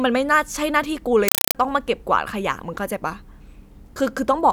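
From 1.28 to 1.55 s the speech gives way to a compressed stream played as audio: a Dolby Digital (AC-3) bitstream reached the output undecoded and was treated as ordinary samples. It sounds like harsh, very loud chattering static. The waveform shows loud noise bursts about 4 ms long, repeating 31.25 times a second with near-silent gaps between them. On a spectrogram these appear as broadband vertical stripes, a pattern that fits a 192 kbps AC-3 stream.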